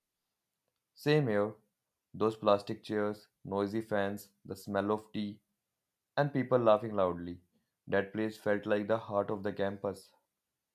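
No faults detected anywhere in the speech recording.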